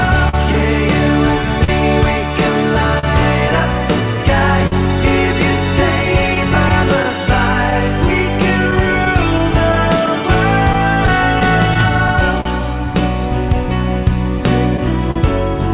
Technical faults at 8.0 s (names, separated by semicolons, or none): clock drift between sender and receiver; repeated timing corrections; scattered short gaps